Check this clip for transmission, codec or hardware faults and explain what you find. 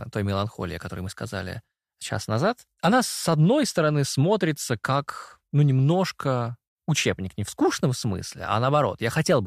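One hardware fault is present, confined to the opening of the speech. From 0.0 to 1.67 s there is sample clock jitter: the converter clock wanders by roughly a microsecond, so samples land early or late. The timing error scales with waveform slope, adding a faint hiss and roughness about 45 dB below the signal that tracks loud and bright passages and disappears in pauses.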